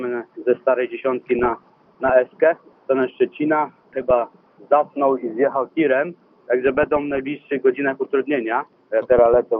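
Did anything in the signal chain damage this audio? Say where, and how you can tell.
Yes. At the codec stage, the whole clip sounds dull and gurgly, with grainy upper bands flickering, likely MP2 compression, fitting a low rate around 80 kbps.

DAB burbling at 1.29–2.10, 3.93–4.11, 6.67–7.20 and 9.12–9.35 s: short noise blips in single sub-bands where transmission bit errors slipped past error correction into the MP2 audio data.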